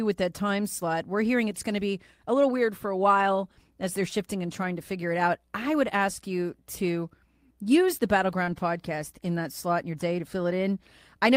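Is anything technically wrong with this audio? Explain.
Yes. There are two network faults, close together.

At 8.43 to 8.50 s there is short concealed packet loss. About 40 ms never arrived. The receiver extended the preceding sound to cover it, leaving a brief smear and slightly stretched timing.

From 8.47 to 8.61 s comes a lost packet rebuilt from error correction. About 80 ms, which fits four lost packets, was played from low-bitrate copies. It sounds rougher and noisier.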